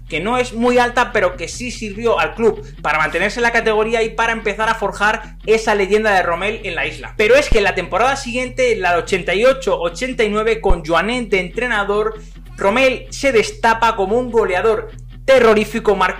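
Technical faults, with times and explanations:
7.52–7.59 s and 10.70–10.75 s, phantom power thump: a supply voltage is switched on a live input, and the sudden DC step passes through the coupling capacitors as a single low-frequency pulse. Each thump is heavy and short, peaking at about -3 dBFS and dying away within roughly 15 ms and 11 ms. On a waveform it appears as a large one-sided excursion with a quick tail; on a spectrogram, a bright burst confined to the bottom bins.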